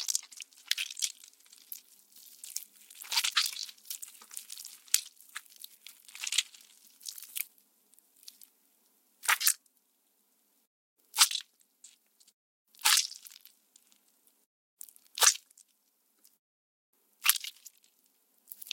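Listening through this recording of sounds, nothing stood out as a technical problem at any point.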